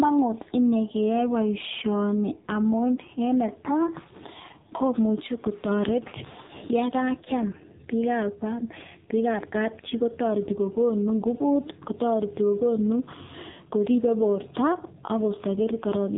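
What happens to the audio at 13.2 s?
At 13.2 s the speech is still carrying the AMR narrowband mobile codec damage that runs through the entire clip. The voice is resampled for an 8 kHz system, so nothing above about 3.8 kHz survives, and each 5 ms a handful of pulses drives a model of the vocal tract. The heavy damage points to one of the codec's lowest modes, near 5.9 kbps, leaving the voice thin, buzzy and distinctly synthetic.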